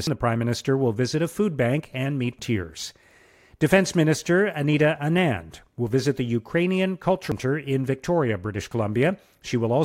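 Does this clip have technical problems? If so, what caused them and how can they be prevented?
Yes. The speech has three short glitches at 0.07, 2.39 and 7.32 s, each a quick chirp or blip. That's damaged data in a compressed stream: bytes at those spots were lost, zeroed or overwritten, so the decoder misreads the frame, drops sync and hunts for the next valid frame header before carrying on. To prevent it, transfer and store files with checksums or error-checked protocols, and keep metadata like stream titles out of the audio payload.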